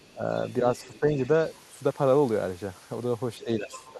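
A speech clip in which the echo canceller likely failed to fully remove the far end's loudspeaker sound from the microphone, so the other side's voice leaks through: faintly at 0.00 to 0.12 s, at about 30 dB below the speech from 0.44 to 1.60 s, and louder, at about 20 dB down, from 3.39 to 3.87 s. Where both sides talk at once, the canceller likely cannot separate the talker from that echo and turns both down, so the speech is suppressed in double talk. It dips by about 15 dB around 0.13 to 0.24 s, only slightly between 0.88 and 1.14 s, and by about 10 dB from 3.44 s to the end.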